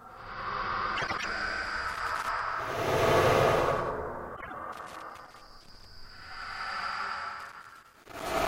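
Frames out of order first appears from 0.96 to 1.25 s. Two adjacent blocks of about 104.5 ms each were decoded in swapped order, which fits runs of four frames exchanged in transit. The stretch plays with its halves reversed, giving a garbled flutter. No time is lost overall.

Loose connector crackle follows from 1.89 to 2.39 s. A worn or dirty contact is making and breaking rapidly, chopping the signal into an irregular burst of scratchy crackle.

Frames out of order returns from 4.36 to 4.53 s with shorter blocks of about 52 ms, which suggests two frames per run. The flutter is briefer and tighter.

The connector crackle recurs from 4.72 to 5.85 s and again from 7.40 to 8.47 s. These are longer ragged bursts of the same intermittent, scratching dropout.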